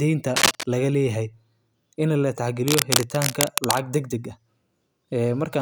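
Speech clip with cable scratch noise. Rustling bursts cover the sound from 0.36 to 0.63 s, louder than the speech, and 2.67 to 3.80 s, about equal. A worn cable or connector being moved is the likely cause.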